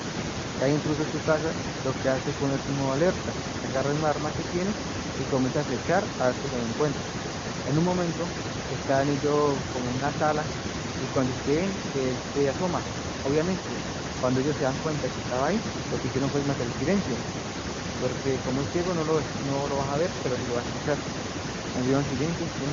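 No technical faults can be heard in this speech recording. It has come through the AMR wideband (HD Voice) codec, and the band above 6.4 kHz sounds only faintly, if at all, like noise standing in for detail, which fits the codec's top 23.85 kbit/s mode.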